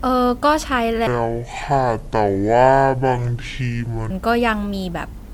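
From the start, the speech sounds swirly, hollow and smeared, with blurred consonant attacks and a watery haze that a single encode at this quality would not produce. This is generation loss, likely from re-encoding several times as MP3, around four passes at a setting that fits 96 kbit/s, each adding fresh quantisation noise and spectral holes.

From 1.07 to 4.10 s, the speech drags and drops deep, slow and heavy, roughly ten semitones below its natural pitch. This section at the wrong speed plays at 0.576 times its recorded rate, likely because it was fitted to the wrong clock, so pitch and tempo fall together.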